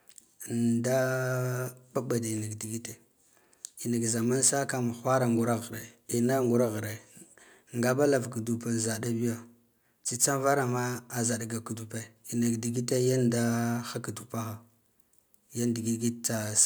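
No technical faults can be heard anywhere in the recording.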